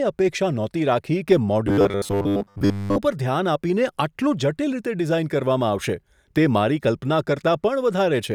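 From 1.67 to 2.99 s, the speech turns into a rigid, metallic buzz at 100 Hz. This robotic sound likely comes from repeated short buffers, roughly 10 ms long, replacing most of the real audio.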